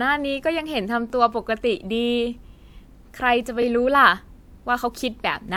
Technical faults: overlapping chunks

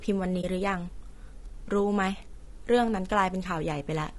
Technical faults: low-delay AAC compression; AAC frame loss with muting

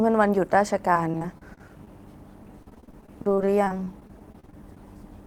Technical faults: repeated packet loss (robotic sound)

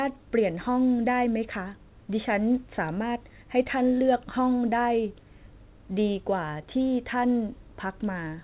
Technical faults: none

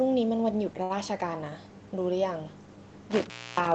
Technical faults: short stall from a late packet; intermittent contact

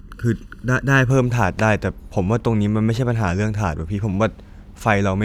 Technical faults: channel delay (comb filtering)

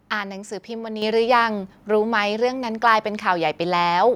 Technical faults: microphone volume stepped up

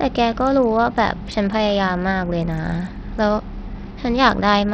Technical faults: Bluetooth SBC compression

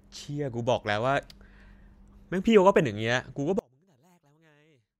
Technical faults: one channel inverted

